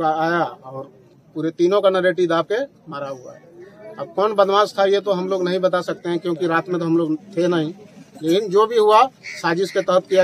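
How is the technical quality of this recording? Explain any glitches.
Nothing glitchy turns up here; the recording runs along without any dropouts, clicks or other hiccups to point to.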